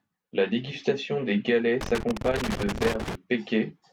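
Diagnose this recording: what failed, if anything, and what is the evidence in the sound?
Loose connector crackle in the analogue wiring: after "dégustation des galets", 1.81 to 3.15 s, irregular scratchy bursts chop the speech, unlike evenly spaced digital buffer clicks.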